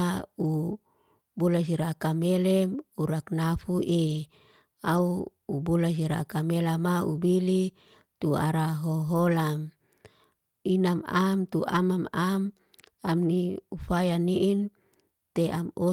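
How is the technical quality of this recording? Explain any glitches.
The recording has six brief spots of lost packets rebuilt from error correction. They fall at 0.43 to 0.49 s, 4.07 to 4.25 s, 4.93 to 4.99 s, 6.03 s, 9.13 to 9.19 s (just after "bili tu ara") and 11.69 to 11.79 s (just after "am tu"). The rebuilt stretches last about 40, 100, 40, 20, 40 and 60 ms, which fits runs of one to five lost 20 ms packets. Each lost packet was replaced with a low-bitrate copy carried in the following packet, so the speech never drops out. It just turns momentarily rougher and noisier. Unlike ordinary packet-loss concealment, there is no smeared, buzzy or repeated tail and no silence, only a brief coarsening of the real speech.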